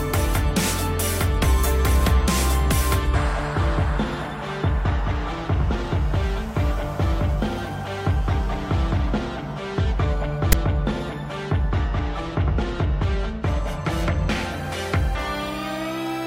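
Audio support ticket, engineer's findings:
File tags played as audio at 10.52 s. Very short hard-edged burst: loud rasp offset to one side, then a drop to silence. The tag block's text bytes are being decoded as samples and its zero padding as silence. Probable component: file parser/demuxer not skipping the metadata.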